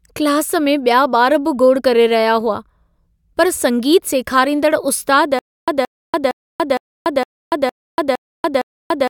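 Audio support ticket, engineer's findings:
Stutter with silent gaps, 5.39 s to end. A 173 ms fragment repeats 8 times, every 461 ms, with 287 ms of digital silence between. Likely a stalled player or stream buffer replaying its last fragment on each retry. Audio for that span is lost.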